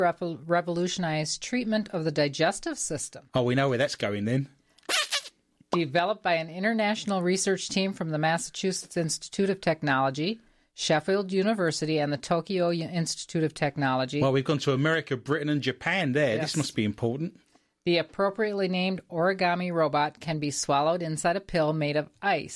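No technical faults occur anywhere in the recording.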